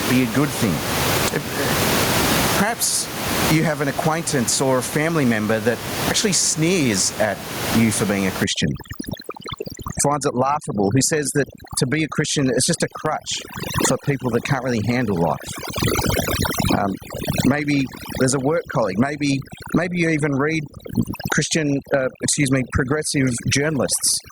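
Across the whole recording there is gain pumping: the room noise sits about 12 dB below the speech, and the gain is pulled down on every loud sound, a swing of around 25 dB. Unlike a noise gate, the background never snaps off, which points to gain set far too high and a fast limiter likely clamping down.

From 8.44 s to the end, overdone noise removal takes over. The background drops and breaks up into twinkling specks as quiet frequency bands are switched off. Unlike the broad ducking of pumping, this loss happens band by band.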